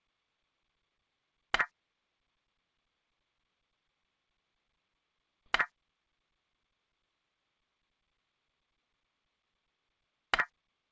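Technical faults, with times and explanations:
5.46 s, skip ahead: About a second of audio was dropped, on the way or by the jitter buffer overflowing, while later material was already queued, then playback resumed with that later material. Playback jumps forward with no gap or fill, so the sound on either side is butted together abruptly.
5.72 to 7.41 s, jitter buffer speed-up: The buffer still held more audio than its target, so the receiver repeatedly trimmed out pitch-period-length slices, about a fifth of a second in total. The sound runs at roughly 112% speed with unchanged pitch and feels hurried.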